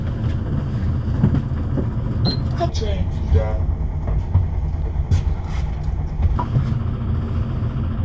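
Wrong sample rate from 2.69 s to 6.36 s: the audio plays back at two-thirds of its proper speed with no rate conversion, so everything drags and drops about 7 semitones in pitch together. That ratio fits 24 kHz material being clocked out at 16 kHz.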